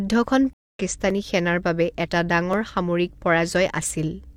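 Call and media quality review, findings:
Stream reconnect, 0.53–0.80 s: about 220 ms of dead silence, then audio picks up just before "সেনাৰ বাবে এটা", skipping roughly 150 ms of content. Link dropped; player reconnected, fresh decoder started mid-stream at a later live position.

Dropped samples, 1.10 s (before "সেনাৰ বাবে এটা") and 2.53 s (after "সেনাৰ বাবে এটা"): single sharp click each, thin vertical line across the spectrum, no audible gap. Likely cause is under a millisecond of samples missing from the stream, so the waveform jumps straight to a later value.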